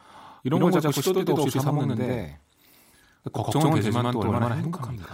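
From start to finish the speech carries a channel delay (doubling): every syllable is followed about 93 ms later by an equally loud copy, heard as a flat slapback. One channel ran late by a long buffer, which fits a 4096-sample buffer, before the two were summed to mono. On a waveform each burst shows a twin offset by that gap; a spectrogram shows every onset and consonant smeared into a repeated vertical edge.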